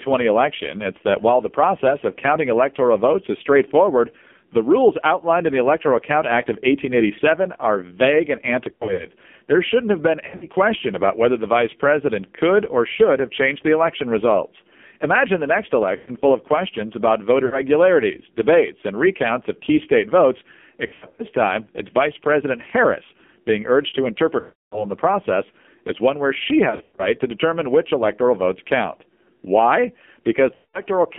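The AMR narrowband mobile codec runs throughout this speech. The band is held to roughly 250 Hz to 3.4 kHz, and the codec rebuilds the voice from a vocal-tract filter driven by sparse pulses. With so few bits, consistent with a low mode near 5.9 kbps, the damage is heavy: a buzzy, synthetic tone with nothing above 4 kHz.

Lost AMR speech frames occur at 8.74–9.11 s, 10.26–10.47 s, 15.96–16.10 s, 17.46–17.61 s, 20.86–21.25 s, 24.40–24.85 s, 26.70–27.11 s and 30.54–30.81 s. Corrupted frames forced the decoder to repeat its last pitch and filter settings at falling gain. Scattered gaps give brief warbles and dips. The solid stretches, especially the roughly 0.3 s one at 24.40 s, smear and fade toward silence before the voice returns rough.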